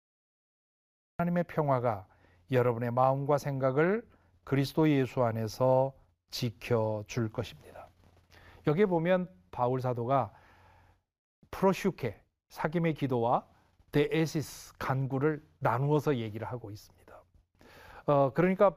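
Right at the top there's a cut-off start: digital silence from 0 to 1.19 s, then the speech comes in abruptly mid-sound at 1.19 s. Capture began late, so there's no natural attack or lead-in, just a hard jump from nothing into sound already underway.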